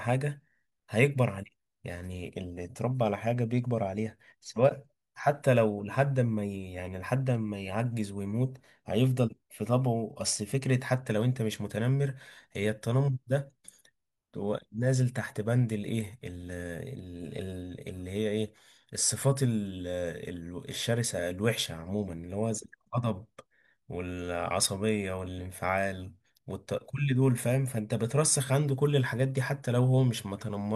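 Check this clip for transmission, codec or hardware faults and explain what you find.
Nothing stood out on listening to this speech clip.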